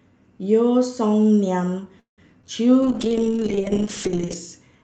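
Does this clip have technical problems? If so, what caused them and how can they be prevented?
Yes. Call audio freeze, 1.99 to 2.20 s: the last sound is stretched into a fading buzz, then about 0.13 s of silence, and the audio resumes where it stopped. The likely cause is packets held up until the jitter buffer ran dry. A larger adaptive jitter buffer and a more stable network route would prevent it.

Short concealed packet loss, 2.42 to 2.45 s: about 20 ms never arrived, so the decoder extended the preceding sound and blended back, leaving a brief smear. Forward error correction in Opus, or redundant packets, would prevent it.

Call bitrate drop, 2.83 to 4.67 s: the sound turns coarse and muffled, consistent with the encoder falling from around 40 kbps to about 7 kbps, staying at the lowest rate for about 1.5 s. More reliable bandwidth, or a higher minimum bitrate setting, would prevent it.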